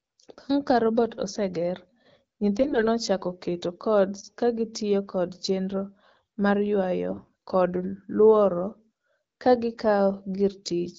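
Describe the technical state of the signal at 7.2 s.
AMR bit errors from 7.10 to 7.29 s: flipped low-priority bits misplace excitation pulses, giving hoarse, gargly sound. On a spectrogram, harmonics smear into ragged noise at near-normal level.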